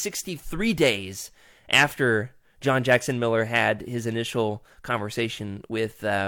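No technical faults occur at any point in this speech recording.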